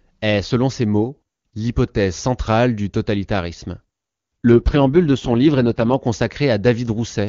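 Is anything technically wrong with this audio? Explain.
Yes, there is an AMR rate drop from 4.52 to 5.93 s in this speech clip. Over that stretch the sound turns rough, buzzy and synthetic, then snaps back to the clearer HD Voice quality heard around it. This points to the AMR wideband codec falling from about 23.85 to around 6.6 kbit/s, with bits shifted to error protection on a weak link. A spectrogram shows smeared, noisier harmonics with no band loss, and the waveform shows no gap.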